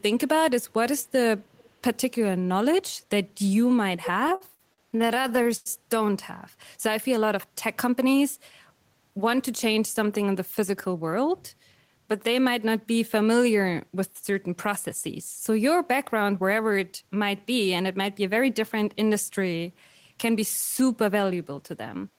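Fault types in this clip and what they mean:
Echo leak: Around 0.99 s and again from 1.56 to 1.7 s, a faint delayed copy of the speech appears, about 30 dB below it and 358 ms late, likely because a loudspeaker-side echo canceller let some of what its microphone picked up pass back.
Repeated stalls (stutter): From 4.27 to 5.68 s the speech drags and stutters as the receiver's jitter buffer ran dry over and over, each gap filled by stretching the last sound, the longest for 96 ms, covering about a third of that span.
Jitter buffer speed-up: At 7.85 to 8.14 s, 10.62 to 11.17 s, 15.86 to 17.52 s and 20.81 to 22.19 s the speech runs faster at unchanged pitch, 107 to 114 percent, as the receiver trimmed short pitch-period pieces to shed excess buffered delay.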